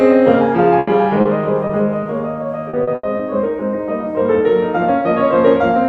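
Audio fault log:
0.79–0.89 s, burst of packet loss: A run of audio failed to arrive in time. For 80 ms the receiver stretched the last sound and faded it down. The music then picks up again later, with 80 ms of it gone.
1.21–1.27 s, 1.67–1.71 s and 2.03–2.07 s, short concealed packet loss: Three brief holes were patched by continuing the preceding sound, for 40 ms, 20 ms and 20 ms. Each is heard as a small smear or wobble where the real audio blends back in.
2.69–3.21 s, repeated packet loss (robotic sound): Four separate holes hit this half-second, the longest 80 ms. Together they cover 180 ms, roughly a third of the stretch. Each patch runs into the next loss, so the music turns choppy, with pieces missing.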